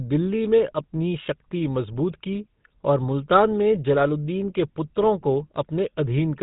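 GSM full-rate codec damage runs through the whole speech clip. The coder models the vocal tract, drives it with sparse, regularly spaced pulses and removes everything above 4 kHz, giving a plainly audible buzzy, gravelly roughness that fits a 13 kbps full-rate stream.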